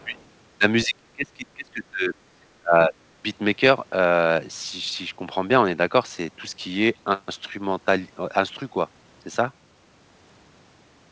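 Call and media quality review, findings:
Speech suppressed in double talk: speech dips about 20 to 25 dB at 0–0.17 s, 0.85–2.14 s, 2.6–3.17 s. Likely AEC gating near-end speech while the far end talks.

Other side's voice leaking through: faint second voice, about 35 dB under speech, at 0.15–0.23 s. Likely residual loudspeaker echo left by the echo canceller.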